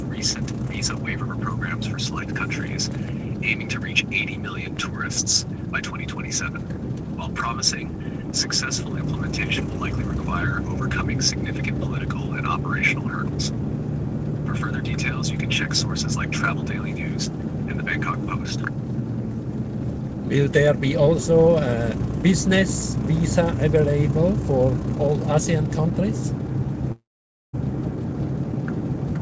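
From 26.92 to 27.55 s the sound smears into a fading buzz, then about half a second of silence. This is likely a long network dropout; roughly 0.62 s never returns.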